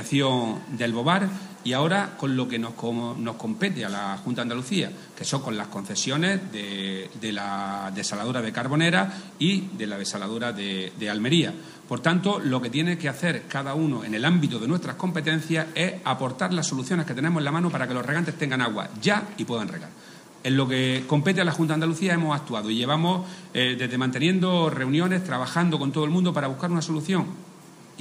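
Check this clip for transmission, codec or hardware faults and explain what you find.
No transmission, codec or hardware faults.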